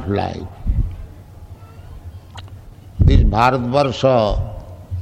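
Three short glitches here, all corrupt frame decoded. At 0.39 s there's a quick glitch from about one damaged frame, peaking around -20 dBFS. From 2.35 to 2.39 s a louder glitch spans roughly two frames, up near -15 dBFS. At 3.84 s a quieter glitch, around -25 dBFS, comes from about three frames. In each case the decoder played frames with flipped bits, so misread gains and codes put energy at the wrong frequencies.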